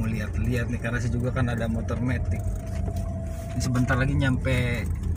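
No technical fault can be heard anywhere in this audio. At no point does anything in the signal chain interrupt or alter the sound.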